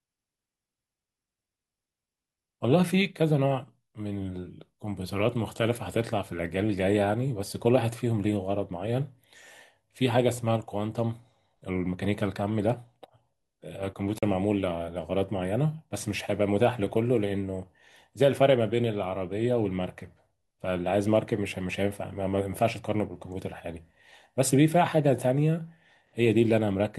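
A Bluetooth dropout runs from 14.18 to 14.23 s: the speech cuts to silence for about 41 ms, which fits two lost packets, then resumes further on as though it had kept playing. Late packets at the headphones are the likely cause.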